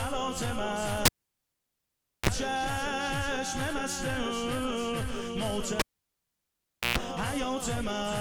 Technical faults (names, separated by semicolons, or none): cable pulled and plugged in